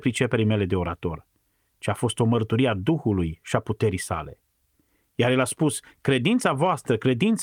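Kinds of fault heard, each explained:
No faults can be heard in this speech.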